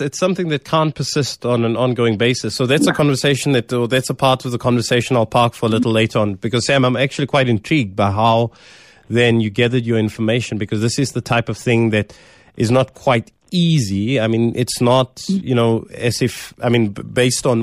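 Nothing in this recording of speech stood out as a technical problem on listening.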